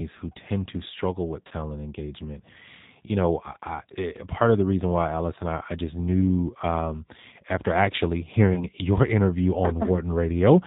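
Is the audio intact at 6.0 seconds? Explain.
No. At 6.0 seconds, as throughout, the speech is rebuilt by a G.729 codec from a vocal-tract filter, pitch prediction and sparse pulses, which fits an 8 kbit/s stream. Nothing above 4 kHz remains, so it sounds dull, rough and plainly synthetic.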